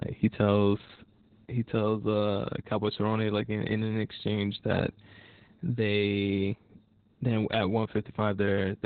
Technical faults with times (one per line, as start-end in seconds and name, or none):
0.00-8.85 Opus voice compression